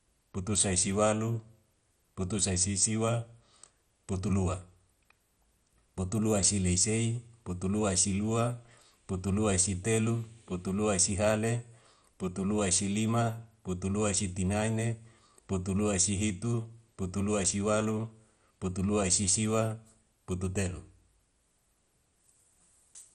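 Speech, likely passed through heavy MP2 compression, which fits a bitrate near 56 kbps, so upper sub-bands drop out: nothing above 13.9 kHz, dull tone with gurgling, granular distortion throughout.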